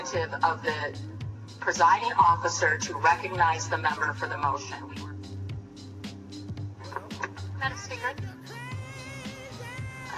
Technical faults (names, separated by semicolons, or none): none